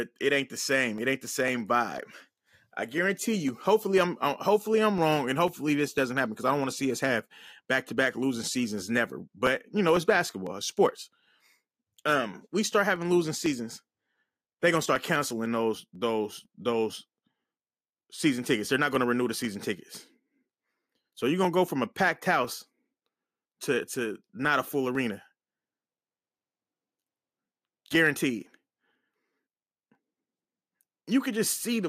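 From 0.48 s, just after "it ain't", to 31.45 s, periodic USB or driver dropouts skip about half a millisecond every 0.5 s, giving evenly spaced ticks, unlike random crackle.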